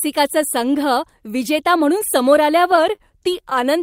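From about 2.43 s to 3.56 s the speech runs into repeated stalls, a stutter: nine short hiccups, none longer than about 29 ms. Packets were showing up late or slower than playback needed, so the jitter buffer kept draining, and each time the receiver stretched the last bit of sound to cover roughly 108 ms in total, about a tenth of that stretch. Nothing is actually lost; it just drags and catches.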